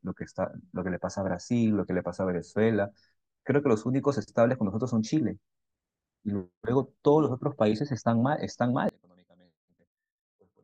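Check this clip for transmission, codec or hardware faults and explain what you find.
One fault is present. From 8.89 s to the end, the speech falls about 32 dB to a faint trace. Likely cause: one channel inverted, cancelling the shared centre in mono.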